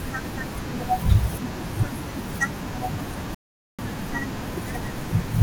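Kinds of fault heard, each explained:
Rebuffering stall: the speech cuts abruptly to silence at 3.35 s and stays silent until 3.79 s, then picks up again exactly where it broke off, with nothing skipped or repeated. That gap of about 0.44 s is pure added time. The player had used up all the audio it had downloaded, so playback halted while it waited for more data to arrive, then carried on from the same point once the buffer refilled.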